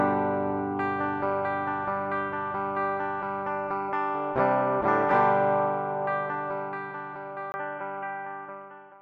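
At 7.52 s the sound drops out for about 20 ms, and from there to the end it comes back dull and boxy, with nothing above 3.4 kHz, a level shift of a few decibels, and a faint new background noise sitting well under the signal. That combination most likely means the input switched to a poorer device partway through, such as a narrowband headset profile or a different mic, bringing its own tone, level and noise floor.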